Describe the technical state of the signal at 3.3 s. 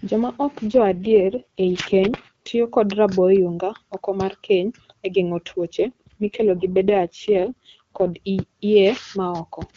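At 3.3 s the speech is intact, with the AMR wideband (HD Voice) codec running at 23.85 kbit/s and leaving no more than faint coding damage.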